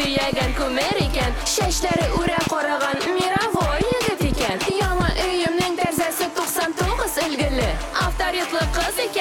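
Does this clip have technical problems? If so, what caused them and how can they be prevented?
Yes. From 0.05 s to 5.99 s there is a train of clicks: about thirty sharp, similar pops at an uneven pace of roughly 4.6 per second, standing well above the sound. This is likely interference from nearby equipment or a faulty connection or power supply injecting repeated pulses. Keep cables and interfaces away from noisy devices and use a stable, well-grounded recording chain.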